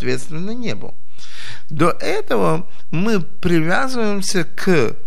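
From start to finish, the speech waveform sits off centre. This is a DC offset of about -14 dBFS. A constant voltage was added somewhere in the chain, so every sample is shifted by the same amount. The ear does not hear it as a tone. It shows up as steady energy at zero hertz, below the audible range. It steals headroom, so peaks reach clipping sooner on one side. Edits and fades may also click.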